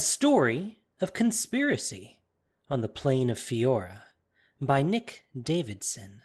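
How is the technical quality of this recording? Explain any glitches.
The speech comes through without glitches or dropouts; its top end stops around 12 kHz, as expected from a call path using a codec such as Opus, and the coding leaves only its usual texture on the sound.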